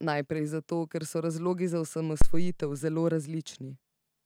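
At 2.22 s a phantom power thump interrupts the speech: a supply step on the live input passes through the coupling capacitors, giving a deep thump peaking around -9 dBFS that decays within roughly 93 ms.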